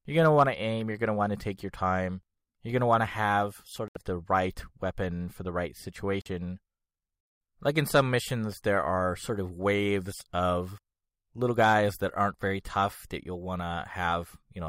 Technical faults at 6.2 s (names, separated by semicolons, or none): Bluetooth stall